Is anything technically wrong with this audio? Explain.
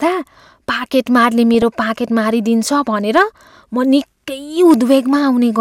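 Yes. This speech clip has two kinds of fault.

From 1.54 to 1.62 s there is DAB burbling. Weak reception lets bit errors, at a low rate well under one percent, slip past error correction into the MP2 data. Corrupted samples put short blips of noise into single sub-bands, and corrupted scale factors make individual sub-bands leap in level for up to a frame, giving short blips and level jumps, which fits several frames being hit. Unlike plain dropouts, the sound keeps going but picks up these blips in single sub-bands.

Hard clipping occurs from 3.16 to 3.22 s, overdriven by about 3 dB, and again from 4.70 to 4.94 s, by about 2 dB. The signal exceeded what a stage could pass, so its peaks were sliced flat, adding high harmonics. This is heard as crackle on the loudest moments. It differs from burbling because the distortion follows the signal's own peaks rather than fluttering in separate frequency bands.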